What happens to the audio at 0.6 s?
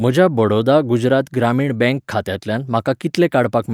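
Nothing goes wrong at 0.6 s; the speech plays through that moment intact, with no dropout, click or other disturbance.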